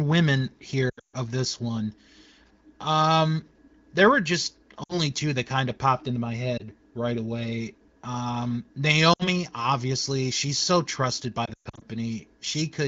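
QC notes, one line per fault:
0.89–1.16 s, 4.83–5.01 s, 6.57–6.62 s, 9.13–9.28 s and 11.45–11.84 s, lost AMR speech frames: the sound warbles and drops to near silence, then returns weak or rough, for example just before "of this one", between "there were just" and "two that kind of", and before "obviously she's so trusted". Corrupted frames were concealed by repeating the last good pitch and vocal tract settings with falling gain. On this wideband link that fades out within two frames. The longest gaps total about 220 ms, in runs up to 140 ms.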